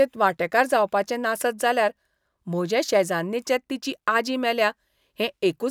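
Across the whole recording the speech signal shows no audible technical faults.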